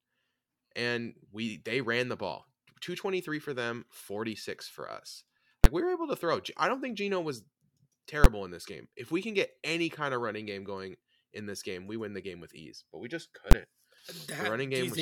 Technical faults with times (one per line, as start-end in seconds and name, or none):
5.64 invalid numbers at full scale
8.24 invalid numbers at full scale
13.51 invalid numbers at full scale